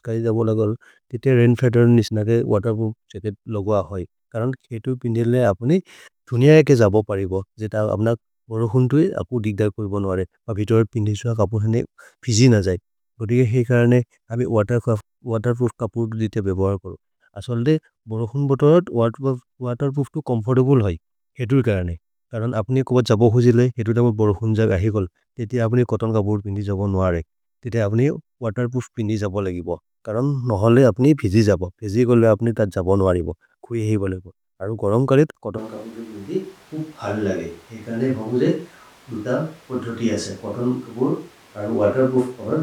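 Switch to a distant microphone in this speech at 35.59 s, after "बोलेगो अरु गरम् करेत्": it turns abruptly roomy, thinner, about 5 dB quieter and noisier to the end, likely because the close microphone dropped out.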